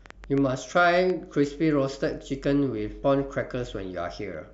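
Right from the start, between 0.06 and 1.11 s, there's a train of clicks: roughly seven sharp ticks at an uneven pace, averaging about 5.8 per second. They poke out about 5 dB above the speech itself. The clicks are all much the same shape, which likely points to something outside the audio, such as interference from nearby gear or a faulty connection or power supply, injecting a pulse over the speech.

Then at 3.02 s there's a case of compressed frames skipped. A few frames never got decoded, so the speech jumps ahead by around 70 ms. The frames are 23.2 ms long, which fits 1024-sample frames at 44.1 kHz.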